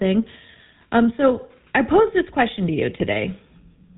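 From start to finish the speech carries the GSM full-rate codec sound. Nothing survives above 4 kHz, and the voice has a buzzy, gravelly grain because the coder rebuilds it from a vocal-tract filter driven by a sparse, regularly spaced pulse train. That fits the 13 kbps full-rate coder. A plain band-limit would only sound muffled, not rough, and unlike later, smoother mobile codecs this roughness is plainly audible throughout.

At 3.00 to 3.08 s, just after "this question to you", GSM bit errors break through. For about 80 ms the decoder receives corrupted filter, pitch and gain values, so the spectrum bends and the level jumps, giving a short squawking, gargling burst. Five damaged 20 ms frames are involved, at a bit error rate near 1.3 percent. A dropout would go silent or repeat sound, and a click would be a single instant, but this is a garbled, distorted stretch.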